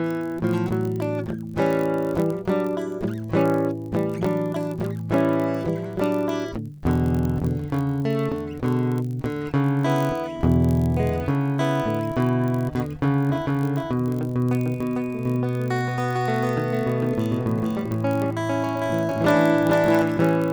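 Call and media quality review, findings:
Block size mismatch (padded), throughout: upstream stage writes short blocks, remainder zero-filled, fitting a 1024-sample read size. Music carries a 46.9 Hz buzz, runs at 0.999x speed, pitch near normal.

Doubled audio track, 13.29–20.02 s: likely a second, slower capture path mixed in. Full-band copy at roughly equal level trails about half a second behind, starting and stopping abruptly.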